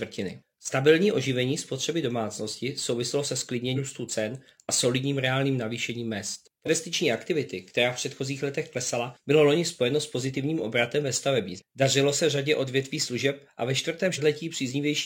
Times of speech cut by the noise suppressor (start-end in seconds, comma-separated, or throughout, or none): none